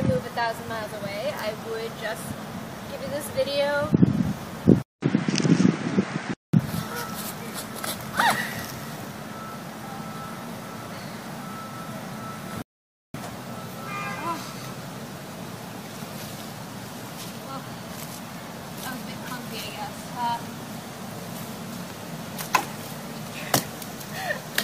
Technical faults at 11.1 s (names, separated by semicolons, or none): none